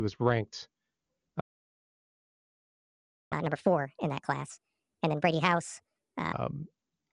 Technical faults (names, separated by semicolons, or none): playback stall; catch-up at higher speed